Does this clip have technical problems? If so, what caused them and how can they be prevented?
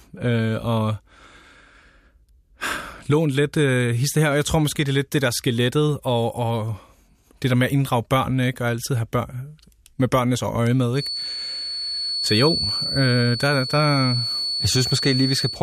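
Yes. The loudspeaker-to-microphone loop was likely sitting right at the edge of feedback, letting one frequency ring without running away. From 10.92 s to the end of the speech, this feedback whistle holds a thin, steady 4.4 kHz tone, swelling and fading slowly, just below the speech level. Prevent it by lowering monitor gain, moving the microphone away from speakers, or notching around 4.4 kHz.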